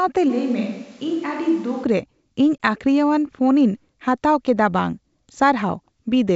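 The clip is speech carried over a G.722 wideband telephone path. From 0.31 to 1.82 s the sound turns roomy and hollow, with thinner bass. The level drops by about 5 dB, and room noise rises to roughly 30 dB below the speech. The likely cause is a switch to a distant microphone, which picks up more of the room than a close one. At 2.58 s there is packet loss on an ADPCM call. A 20 ms hole of silence replaces what sounds like one lost packet. Afterwards the decoder's predictor and step size are out of step with the sender's, so the speech resumes with a brief roughness.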